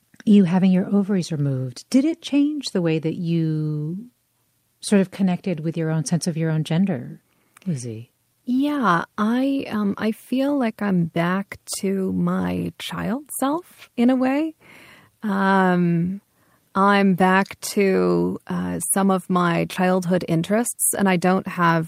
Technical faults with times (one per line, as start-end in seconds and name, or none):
none